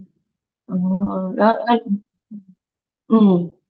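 From 0.93 s to 3.53 s the speech breaks up with repeated packet loss (robotic sound). Short dropouts, the longest 70 ms, are each patched by extending the preceding audio. Roughly half a second is rebuilt this way, leaving the speech choppy and robotic.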